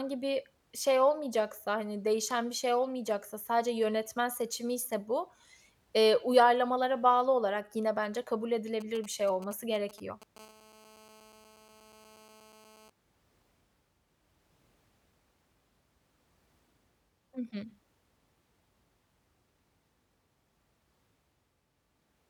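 A nearby 2G phone exchanging short signalling bursts, whose radio pulses the audio circuitry rectifies, produces GSM signalling bursts from 8.81 to 10.38 s. They sound like a galloping dit-dit-dit of brief 217 Hz buzzes, around 20 dB below the speech.

At 10.39 s the phone switches to continuous call transmission, pulsing 217 times a second, and the rectified bursts become a steady GSM phone buzz until 12.90 s. It is a hard, raspy 217 Hz tone rich in harmonics, about 27 dB below the speech, and bears no relation to it.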